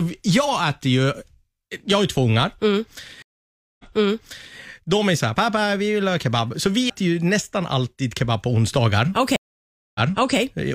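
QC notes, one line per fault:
3.22–4.56 s, stream reconnect: the connection dropped, the player stalled, then reconnected and started a new decoder mid-stream. About 0.57 s of silence opens the gap. Because the server resent a burst, playback resumes about 0.77 s earlier than where it broke off, so the sound just before the dropout is heard a second time. The restart is softened as the fresh decoder's first frames come in muted or faded.
6.90 s, CD skip: a shock or disc flaw threw the laser onto another turn of the spiral. The player muted for only a few milliseconds, heard as a brief tick, and then carried on from a different point on the disc, so the sound jumps abruptly instead of continuing smoothly. The discontinuity lands right before "ju nästan alltid kebab".
9.36–10.38 s, stream reconnect: a second break in the connection forced another reconnect and decoder restart. About 0.59 s of silence follows, and playback then picks up about 0.43 s earlier than where it stopped, because the server resent part of the stream. 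That stretch of sound is repeated, and the fresh decoder's muted or faded first frames make the return less abrupt.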